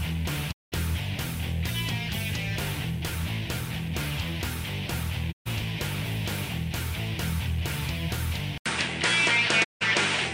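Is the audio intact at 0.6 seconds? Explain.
No. A digital broadcast dropout runs from 0.51 to 0.74 s. The receiver stopped getting valid frames and muted until good ones returned. The audio fades out over 20 ms into silence, and 192 ms of programme is simply gone, which fits about six lost frames.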